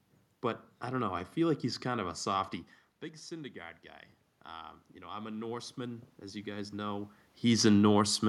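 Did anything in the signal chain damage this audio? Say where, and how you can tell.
Yes. The call processing's automatic gain control reacted to an input drop of about 12 dB by raising its gain about 5 dB from 4.48 to 7.18 s. This is automatic gain rising: the room noise swells along with the voice, which a talker moving would not cause.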